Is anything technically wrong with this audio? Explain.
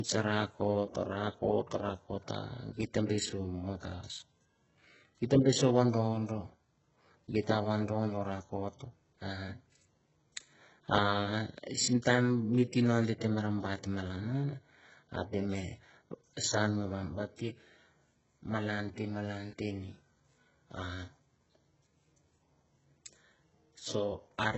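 Yes. Heavy HE-AAC compression damage runs through the whole speech clip. The likely cause is a very low bitrate, near 8 kbps. Nothing survives above 7.9 kHz. The treble is rebuilt from copied lower bands, so harmonics misalign. S sounds turn gritty and metallic.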